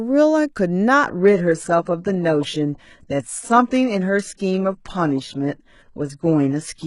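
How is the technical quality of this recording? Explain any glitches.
The recording starts at good quality and then degrades sharply. From 1.07 s to the end, an adaptive stream at a lower bitrate takes over. When the connection slowed, the player switched to a much lighter encoding, which sounds like it fits a drop from around 96 kbit/s AAC to roughly 12 kbit/s HE-AAC. Nothing remains above 11.1 kHz, so the speech sounds dulled, and the upper band turns synthetic and swirly. Unlike packet loss, the switch is abrupt but leaves no gap or stutter. Unlike a simple low-pass filter, it adds codec artefacts along with the lost treble.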